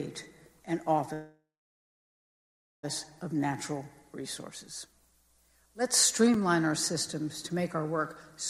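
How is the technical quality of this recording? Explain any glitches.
The recording has two glitches: a long stall early on and a tiny dropout later.

From 1.13 to 2.85 s there is a call audio freeze. The last sound carries on as a fading buzz or hiss that dies into about 1.35 s of silence, then the audio resumes where it stopped. The likely cause is packets held up in transit, starving the jitter buffer. About 1.7 s is inserted and nothing is lost, so everything after plays later. That sets it apart from a packet-loss gap, where material would be skipped.

At 6.34 s there is a block of digital silence lasting about 5.33 ms, which fits a 256-sample buffer that wasn't filled in time and was output as zeros. The sound drops straight to silence and back with no fade, and at well under 15 ms it comes across as a tick or dip rather than a hole. Unlike the freeze, there is no decaying tail.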